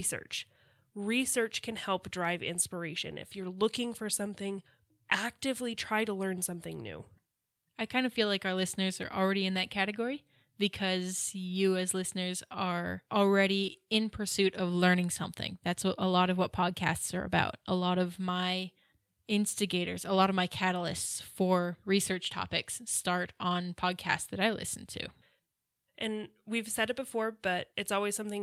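No technical faults can be heard anywhere in the speech, and the signal holds steady for its whole duration.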